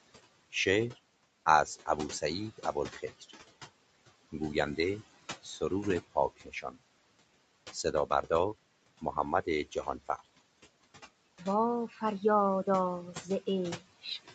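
Throughout, the background falls away between phrases and swells back up under the speech. These are noise suppressor artifacts: frame by frame, the suppressor lowers the bands it takes for steady noise by about 21 dB. The room noise it is acting on sits about 15 dB below the speech, and the call path keeps nothing above 8 kHz.

At 2.58 to 3.32 s, 5.43 to 5.71 s, 6.15 to 6.76 s, 9.01 to 10.26 s, 11.88 to 12.22 s and 13.13 to 13.28 s, parts of the speech turn faint or swallowed for a fraction of a second each time. The drops are about 8 to 18 dB and deepest around 6.15 to 6.76 s. This is speech cut by the noise suppressor, which took quiet speech for noise and turned it down with the background.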